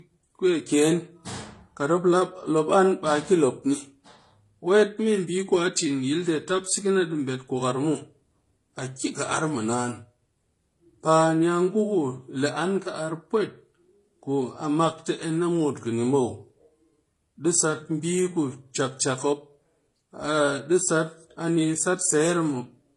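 Throughout the speech, nothing is heard above about 12.8 kHz. The top end is dull and closed off. Two kinds of coding damage sit on top of each other and are heard together. This points to transcoding between lossy codecs, likely a low-rate MP3 pass near 48 kbit/s followed by HE-AAC near 24 kbit/s. The second codec wasted bits re-encoding the first codec's artefacts. It then added its own.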